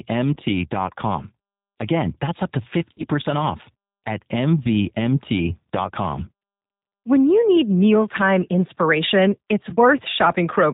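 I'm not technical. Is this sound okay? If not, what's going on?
No. Two separate problems are audible.

The whole recording has passed through the G.729 codec, a compressed phone-call format used in internet telephony. It rebuilds speech from a rough model of the voice rather than storing the actual sound. Everything above about 4 kHz is discarded, so the speech sounds muffled and phone-like, and the compression damage is plainly audible as a slightly rough, synthetic quality throughout.

There are also short breaks caused by VoIP packet loss concealed by the speech codec. Pieces of the call went missing in transit, and the decoder filled the gaps by stretching the last bit of sound it had while fading it down, giving a brief buzzy or smeared patch. This happens at 0.34 to 0.37 s; from 2.94 to 3.07 s, right after "that's up to" and before "off at", as several small dropouts close together; at 4.63 to 4.67 s, just after "off at"; and at 9.70 to 9.76 s, after "need mealtime inspiration it's".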